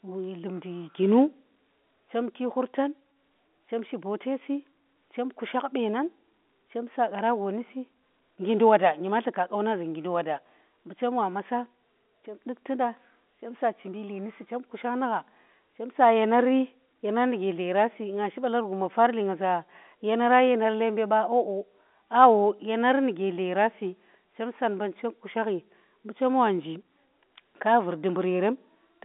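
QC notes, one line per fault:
No faults to note, so no fault lines.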